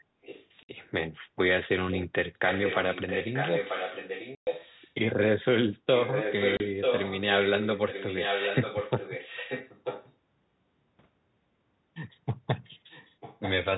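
Speech, with an echo leak in four stretches. A delayed copy of the voice trails the speech by 940 ms. It is faint, around 15 dB down, from 0.22 to 0.5 s and from 12.9 to 13.53 s. It is much stronger, only about 5 dB down, from 2.47 to 4.94 s and from 5.95 to 10.13 s. The likely cause is a loudspeaker at the far end whose echo canceller let its own pickup through. There is also packet loss filled with silence. Hard-edged gaps open at 0.63 s for 60 ms, at 4.35 s for 120 ms, and at 6.57 s for 30 ms. Every gap is a multiple of 30 ms, which fits 30 ms packets dropped and replaced with silence.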